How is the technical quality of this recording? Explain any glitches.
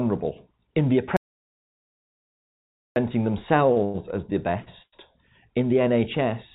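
The recording has several glitches: one long hole and a cluster of short hiccups, all heard through narrowband call audio with nothing above 4 kHz, which fits G.711 mu-law at 64 kbps.

Audio dropout to silence, 1.17 to 2.96 s: the speech cuts off and there's about 1.8 s of dead digital silence with no room tone, then it resumes mid-flow. That's likely the input dropping out while silence kept being written, so whatever was said there is gone.

Short stalls from late packets at 3.72 to 3.79 s, 3.84 to 3.97 s (just before "as the"), and 4.62 to 4.69 s (just after "as the"): a packet turned up late, the jitter buffer ran dry, and the last bit of sound got stretched. You hear a held smear with a slight buzz or dip, of 42, 99 and 42 ms. Nothing's lost, but timing slips each time.

Call audio freeze, 4.82 to 4.96 s, shortly after "as the": a longer wait on packets, likely from network delay, gets filled with a fading buzz or hiss. 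About 50 ms of it sinks into silence before the speech picks up exactly where it stopped. That inserts roughly 100 ms without losing anything.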